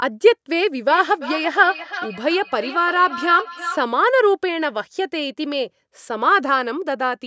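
Feedback echo between two devices runs from 0.9 to 3.89 s. A second device on the call replays this microphone's sound, which is captured again, and each syllable returns about every third of a second, thinner and ringing, peaking about 11 dB below the speech.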